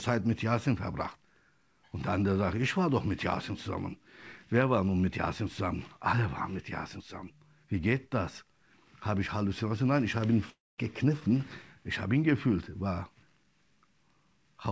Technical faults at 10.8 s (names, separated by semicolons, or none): long network dropout